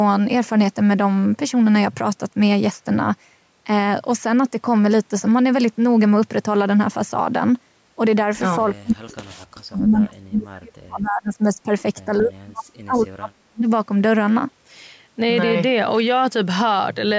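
From 8.6 to 11.66 s and again from 12.2 to 13.69 s, the speech drops away by around 40 dB, likely speech suppressed in double talk by an echo canceller.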